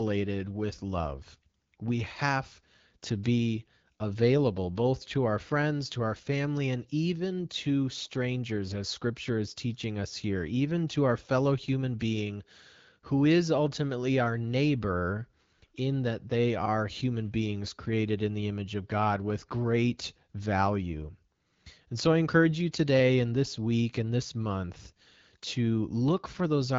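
No technical faults can be heard in this speech recording. It carries the band-limited character of AMR wideband (HD Voice) coding at a rate that fits 12.65 kbit/s, with speech energy reaching up to about 7 kHz and the topmost part filled in by the codec's shaped noise.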